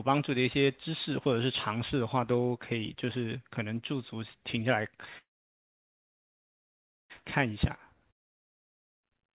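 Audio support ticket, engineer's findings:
Call audio freeze, 5.18 to 7.12 s: the last sound smears into a brief fading buzz, then about 1.86 s of silence. Likely the jitter buffer ran dry while packets were stuck in transit. Playback picks up where it stopped, nothing lost, but everything after runs about 1.9 s late.

Long network dropout, 8.11 to 9.05 s: the same short fading buzz into roughly 0.9 s of silence, but this time the audio resumes further on. About 0.92 s of the sound is gone for good, likely from packets that never arrived.

Call path note: the band stops at 4 kHz with coding noise, which fits G.711 mu-law at 64 kbps.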